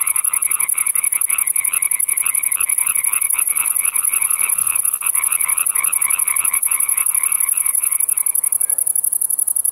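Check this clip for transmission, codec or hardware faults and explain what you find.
Two jitter-related faults show up, both in the middle of the clip.

From 3.90 to 3.94 s there's a short stall from a late packet. The jitter buffer ran dry, so the receiver stretched the last bit of sound for about 19 ms until the packet showed up, then carried on. Nothing's lost, but that moment hangs a touch too long.

Between 4.40 and 5.03 s you get repeated stalls, a stutter. Packets kept arriving late, so the buffer emptied four times, with the longest gap at 42 ms. The receiver padded about 69 ms in total, roughly 11% of that stretch. Nothing's missing, but the audio drags and stutters there.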